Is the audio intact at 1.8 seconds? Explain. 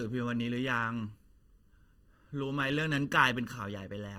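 No. At 1.8 seconds, as throughout the clip, one channel arrives late by roughly 0.7 ms, and summing it with the other to mono produces channel delay (comb filtering). Content common to both channels cancels at evenly spaced frequencies, the first notch falling somewhere near 700 Hz and the rest stacking above it. The speech takes on a hollow, phasey colour from these fixed notches in the spectrum.

Layered on that is grainy, rough coding damage, most likely from Opus compression in its music (CELT) mode at a low bitrate, which fits something around 24 kbps. When bits run short, the encoder preserves each band's energy but fills the detail with folded or noise-like content, so the voice sounds noisy and coarse rather than swirly. The bandwidth stays full, extending to roughly 20 kHz.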